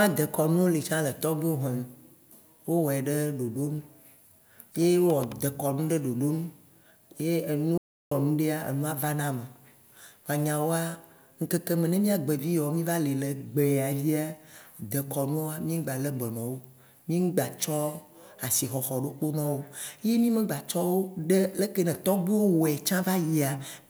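At 7.78 s the speech cuts off mid-flow and returns at 8.11 s: an audio dropout to silence lasting about 0.34 s. The gap is silent with no room tone, unlike a natural pause, likely from input loss while recording continued.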